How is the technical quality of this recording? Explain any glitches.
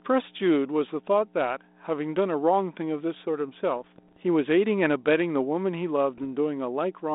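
The recording has two problems: a constant hum under the whole clip, and two short stretches of digital corruption in the speech, which comes through a narrow telephone band of roughly 250 Hz to 3.7 kHz consistent with 32 kbit/s G.726 ADPCM.

Mains hum runs throughout at 60 Hz. A ground loop or nearby transformer leaks the power line into the signal, leaving a steady low tone about 15 dB below the speech.

Bit errors on an ADPCM link occur from 3.76 to 4.17 s and from 6.18 to 6.22 s. A small fraction of flipped bits throws off the decoder's step size and prediction, producing pops and rough bursts with brief level jumps.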